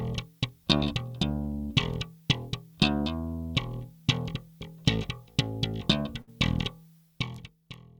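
The audio is a call recording with two network dropouts. At 0.77 to 0.83 s, short concealed packet loss occurs: about 40 ms of audio arrived too late for the decoder, so the receiver extended the preceding sound to fill the hole and blended back in, leaving a brief smear or wobble. At 6.21 to 6.29 s, a burst of packet loss removes about 60 ms. The receiver again extended the last sound and faded it as the gap lasted, producing a held buzz or fading hiss before the audio resumes with that stretch missing.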